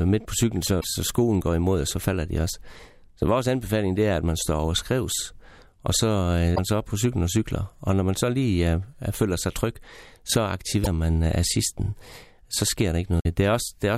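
Damaged data in the compressed stream hits the speech four times. It occurs at 0.77–0.84 s after "midt på cyklen", 6.52–6.59 s after "over skrives og så", 10.80–10.87 s after "føler sig tryg så", and 13.18–13.26 s. Corrupt bytes throw the decoder off frame sync until it finds the next header. Each break lasts 66–78 ms and sounds like a short squawk or blip.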